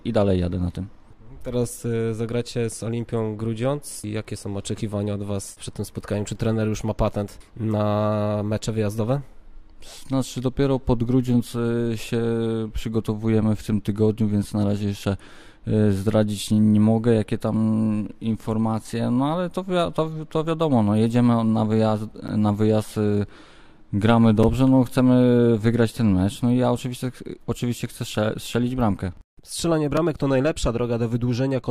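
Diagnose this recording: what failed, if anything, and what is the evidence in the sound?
The driver or buffer stage failed: on three occasions the output buffer was not filled in time and went out as a block of digital silence. The audio drops abruptly to silence and returns with no fade, and since every gap is shorter than about 15 ms, each is heard as a tick or dip rather than as silence. At 22.28 s the hole lasts about 10.7 ms, at 24.43 s about 5.3 ms, and at 29.97 s about 2.8 ms. The first two lengths fit 512- and 256-sample buffers.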